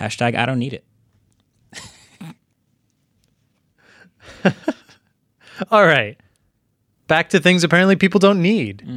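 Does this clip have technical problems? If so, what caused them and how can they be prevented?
No, there are no technical problems to report in this speech clip. Nothing in it calls for a fix or for any change to how it was captured.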